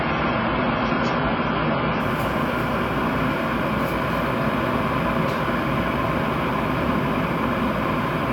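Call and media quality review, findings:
Dull, band-limited sound with stronger codec artefacts, nothing above 7 kHz, 0.0–2.0 s, then a sudden gapless jump in clarity: adaptive stream starting at a low bitrate, consistent with a 16 kbit/s AAC start stepping up.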